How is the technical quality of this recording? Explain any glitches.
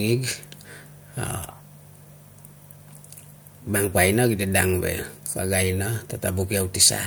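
No technical glitches are audible in this recording.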